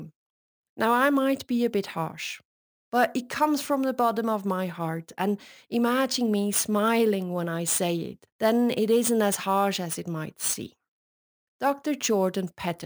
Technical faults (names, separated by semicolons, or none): crude rate conversion